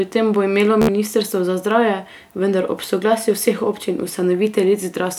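It's a speech clip with a Bluetooth stutter from 0.82 to 0.88 s, just after "tem bo imelo". A few packets went missing, so the receiver looped its last scrap of audio as a short buzz. About 67 ms is lost before "za zdravje vendar ob" picks up.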